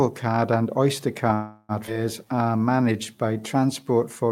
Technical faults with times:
0.00-4.31 low bit depth without dither
1.33-1.72 call audio freeze
1.87-1.90 skip ahead
2.25-3.84 jitter buffer slow-down

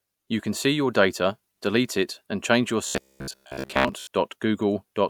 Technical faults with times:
2.87-4.07 robotic sound from repeated short buffers

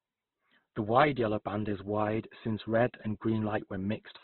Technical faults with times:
0.00-4.23 Opus compression

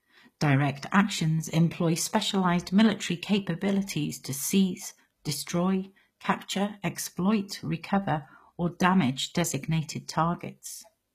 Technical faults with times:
0.00-11.15 low-bitrate audio saved at a high bitrate

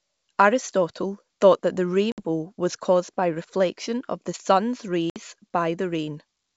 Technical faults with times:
2.12-2.21 packet loss on an ADPCM call
5.10-5.19 packet loss on an ADPCM call

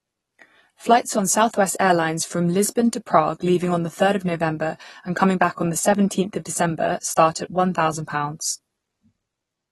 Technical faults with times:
0.00-9.71 AAC compression

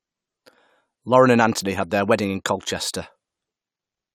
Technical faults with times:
none

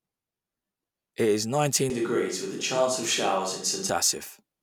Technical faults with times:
1.90-3.89 switch to a distant microphone

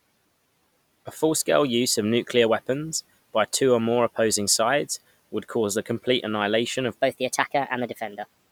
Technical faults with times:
7.00-8.52 section at the wrong speed

